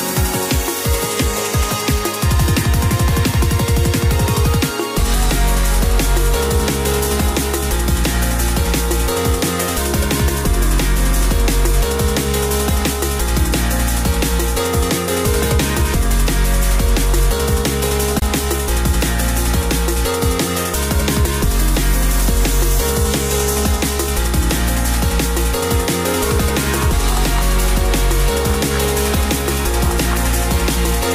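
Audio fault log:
18.19–18.22 s, Bluetooth dropout: the sound cuts out for about 23 ms and picks up further along, as if it had played on. The likely cause is a packet reaching the headphones too late, which fits a single lost packet.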